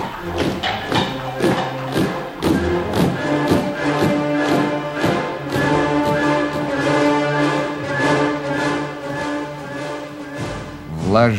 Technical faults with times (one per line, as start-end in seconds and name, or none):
none